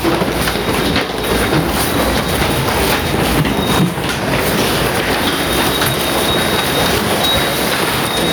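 Right from the start and all the way through, there's gain pumping. The level gets shoved down the moment anything loud comes in, a swing of around ten decibels. Loud and soft moments sit oddly close together, so the whole thing feels squashed and breathing. The likely cause is the input gain set far too hot, with a fast limiter or compressor clamping down on every peak.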